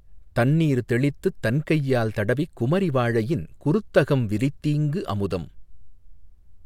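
Nothing in the speech stood out as a technical fault on listening.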